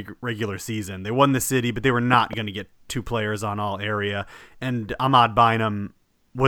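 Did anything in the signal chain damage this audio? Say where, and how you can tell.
Yes, a loud pop from 2.13 to 2.35 s: two sharp thumps around 10 dB above the speech, which continues underneath. That points to the analogue wiring stage, likely a plug or switch transient, where a sudden voltage step joined the signal and downstream circuits shaped it.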